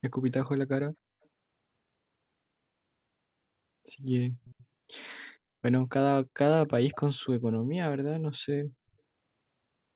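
Faint delayed copies of the speech surface at 1.23 s, 4.45 to 4.65 s, and 6.92 s, trailing by 285 ms. This is likely an echo leak from a loudspeaker side's incomplete echo cancelling.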